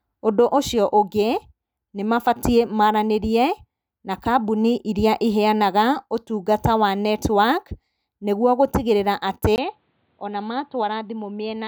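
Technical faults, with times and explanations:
9.56–11.67 s, input switched to a poorer device: after a 20 ms gap the speech goes dull and boxy, with nothing above 4.6 kHz, a touch quieter, and a faint new noise floor, likely from recording jumping to a cheaper mic or headset call profile.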